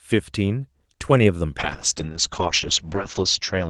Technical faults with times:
1.61-3.70 call bitrate drop

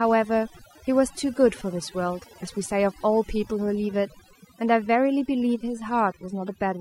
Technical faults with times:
0.00-6.81 overdone noise removal

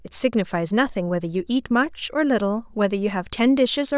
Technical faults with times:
none

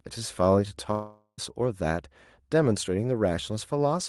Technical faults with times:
0.91-1.40 long network dropout

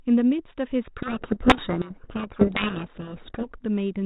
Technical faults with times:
0.98-3.52 codec payload misread

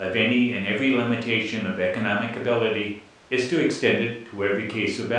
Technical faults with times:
none

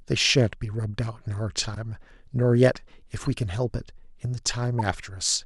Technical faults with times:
1.74-1.77 corrupt frame decoded
3.22-3.27 corrupt frame decoded
4.79-4.81 corrupt frame decoded

